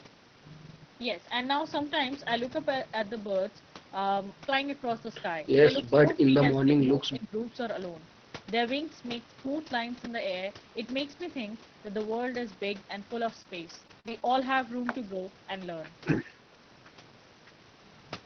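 From 6.24 to 6.42 s and 6.91 to 7.32 s the speech dips by about 15 dB, likely speech suppressed in double talk: gain pumping, not robotic artefacts. Between 13.40 and 14.22 s, repeated packet loss leaves seven gaps up to 46 ms, patched by stretched sound into choppy speech with pieces missing rather than smooth level dips.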